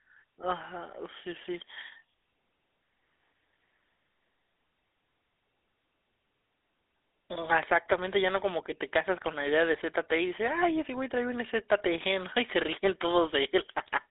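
Throughout, the GSM full-rate codec drives a vocal-tract model with coarse pulses, making the speech buzzy and gravelly. A spectrogram shows nothing above 3.8 kHz.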